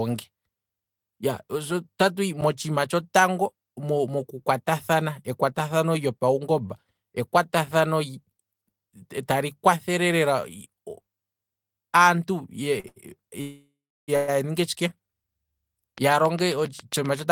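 At 2.41 s there's a block of digital silence, about 10 ms where the sound simply drops out with no fade. The output buffer probably wasn't filled in time, and with a gap that short it comes across as a single tick.

Around 12.8 s come two short stalls from a late packet: 12.80–12.86 s (38 ms) and 12.88–12.98 s (82 ms). Each time the jitter buffer ran dry, so the receiver held the last sound until the packet turned up. You hear a brief drawn-out bit, nothing lost.

Then 13.41–14.10 s has a call audio freeze. The sound hangs, fades into a buzzy tail and goes fully silent for about 330 ms before picking up where it left off, likely packets held up in transit. A smaller one follows at 14.16–14.30 s, a 120 ms hold with no silent stretch.

From 14.60 to 15.53 s the jitter buffer slow-down kicks in as the receiver rebuilds its reserve by repeating pitch periods. About 65 ms gets added, so the audio plays at roughly 94% speed, same pitch, slightly stretched.

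From 15.98 s to the end there's a train of clicks, evenly spaced at about 7.4 per second and poking out well above the speech, pauses included. That's likely interference or a faulty connection.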